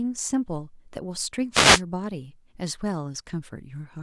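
At 1.52 s a wireless microphone noise hit interrupts the speech for about 0.3 s, ending at 1.82 s. The FM radio link fades as reflected signals cancel at the receiver, so the receiver's own noise rises and washes over the voice as a brief swish of static. On a spectrogram it appears as a broadband vertical band of hiss across the frequency range. In the waveform the speech envelope is smeared by a dense noisy patch.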